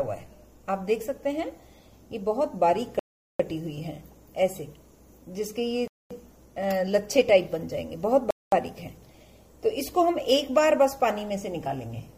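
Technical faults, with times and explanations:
2.99–3.40 s, 5.88–6.11 s, 8.31–8.52 s: Bluetooth stall. The sound drops to silence for 0.40 s, 0.23 s and 0.22 s, then resumes, likely because interference held up packets until the headphones' buffer ran dry. Each gap appears as a flat waveform and an empty vertical band on the spectrogram.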